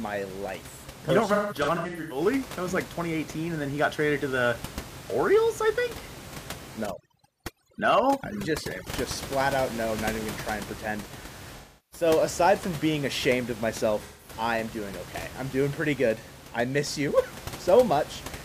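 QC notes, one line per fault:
1.33–2.21 s, 11.57–12.07 s, 14.04–14.33 s: AAC frame loss with concealment. The decoder rebuilds missing frames from the last good spectrum, leaving smeared, phasey patches. The first gap totals 0.47 s of loss scattered over 0.77 s, with the longest run around 150 ms. Later gaps fall between "gonna try and pretend" and "aside from being ashamed", and just before "I am doing okay".
6.86–8.87 s: overdone noise removal. Noise reduction set too strongly pulls individual bands down whenever they approach its noise estimate. The room noise, about 14 dB below the speech, drops and breaks up into twinkling specks, right up to "just flat out no".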